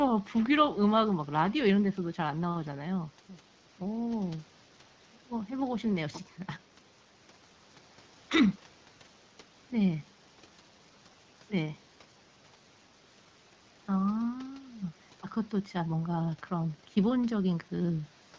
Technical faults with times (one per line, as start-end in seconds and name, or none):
none